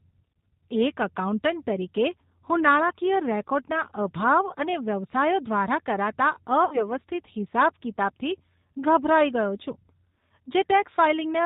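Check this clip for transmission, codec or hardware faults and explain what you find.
Two faults are present: the whole clip has passed through a low-bitrate speech codec, and one short dropout was concealed by that codec.

G.729 codec, throughout: the speech was squeezed through a coder that fits G.729A at 8 kbit/s, which keeps only a vocal tract filter, a pitch predictor and a few coded pulses per 10 ms frame, and discards everything above 4 kHz. The damage is plainly audible: the voice sounds band-limited and dull, with a rough, slightly synthetic texture where the pulse model approximates the real waveform.

VoIP packet loss concealed by the speech codec, 6.65 to 6.85 s, between "અને વ્યવસાયો દ્વારા કરાતા" and "હિસાબ કિતાબથી ગભરાઈ ગયો": about 60 ms of audio went missing, which points to two lost packets. The decoder filled the gap by repeating its last pitch and filter settings at falling gain, so the sound smears into a fading buzzy tone or coloured noise. 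Each frame builds on the one before, so the voice stays weak or distorted for tens of milliseconds or more after packets return.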